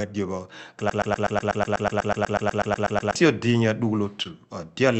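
From 0.90 to 3.16 s, a broken-record loop repeats one 123 ms fragment 18 times. Playback likely stalled. The speech meant for that span is gone.

At 4.23 to 4.27 s, short concealed packet loss leaves a brief smear. About 20 ms went missing, and the Opus call decoder patched 15 ms by extending the preceding sound.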